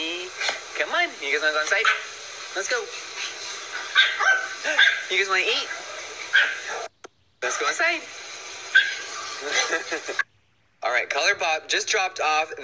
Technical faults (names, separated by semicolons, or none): none